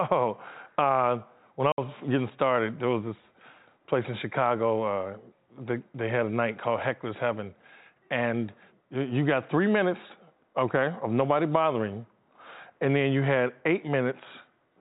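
At 1.72 s, right after "uh when I", the speech drops into a sudden 60 ms hole of dead silence that ends at 1.78 s, with hard edges on either side where the waveform is cut off and then resumes. This is packet loss filled with silence: a run of packets never arrived and the receiver played nothing in their place. The gap's length fits six lost 10 ms packets. The speech is carried over G.711 telephone coding, so it is band-limited at 4 kHz.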